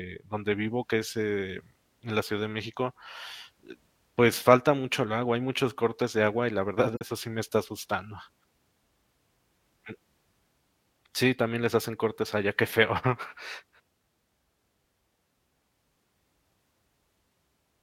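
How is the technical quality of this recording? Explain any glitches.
One glitch stands out: a corrupt frame decoded between 6.93 and 7.01 s, right after "agua y la verdad" and before "sí me está asustando". A brief chirpy burst of noise, peaking around -20 dBFS, cuts in. Damaged bits in a few compressed frames were played anyway, so misread values put energy at wrong frequencies.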